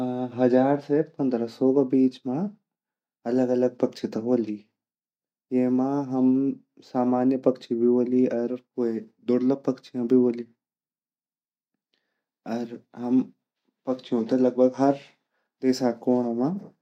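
No technical faults can be heard anywhere in the recording; the speech signal stays steady and intact throughout.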